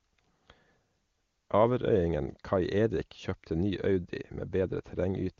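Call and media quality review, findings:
No faults found; AMR-WB HD Voice path at 23.85 kbit/s.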